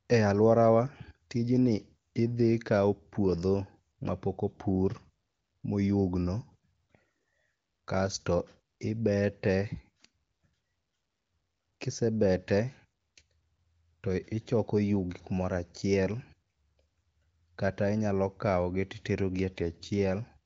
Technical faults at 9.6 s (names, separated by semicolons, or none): none